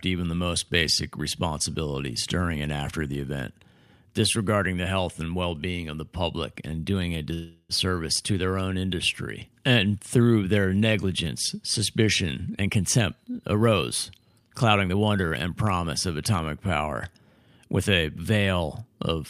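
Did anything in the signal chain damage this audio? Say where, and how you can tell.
Yes. A call audio freeze at the network/jitter-buffer stage runs from 7.33 to 7.72 s, right after "public and doing a". The last sound is stretched into a fading buzz or hiss, which on a spectrogram appears as flat, smeared horizontal bands, ending in about 50 ms of silence. It likely came from delayed packets. Speech resumes intact with "to their own industry", now 359 ms later.

Jitter buffer speed-up, also in the receiver's buffer, occurs at 12.59 to 13.73 s (116%, roughly 200 ms removed, after "through their negligence suspicion") and at 14.19 to 15.50 s (111%, roughly 150 ms, before "promise of atomic power"). Pitch-period chunks were cut out, so the speech sounds hurried. The harmonic spacing on the spectrogram stays the same while the syllables are compressed in time.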